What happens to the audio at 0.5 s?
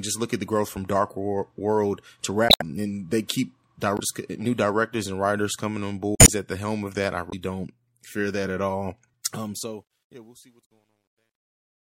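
At 0.5 s the speech sounds watery and swirly, with dulled treble, as it does throughout the clip. This is plainly audible MP3 compression, likely at about 64 kbps, where the encoder cuts high frequencies and drops weak spectral detail.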